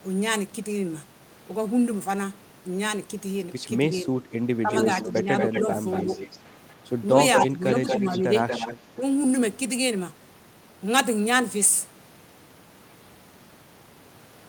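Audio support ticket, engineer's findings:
Speech suppressed in double talk: voice dips and chops in short pieces at 3.9–4.14 s, 4.62–4.71 s, 5.61–6.08 s and 7.48–8.27 s, deepest about 15 dB down. Likely the echo canceller ducking its own talker along with the loudspeaker echo while both sides talk together.

Echo leak: delayed copy of the voice trailing by 234 ms at 4.73–6.38 s, somewhat below the speech, then at 7.09–8.75 s at about equal level. Likely the far-end loudspeaker pickup passing through an incompletely converged echo canceller.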